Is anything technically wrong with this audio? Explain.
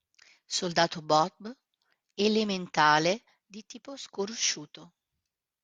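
No, no technical faults heard.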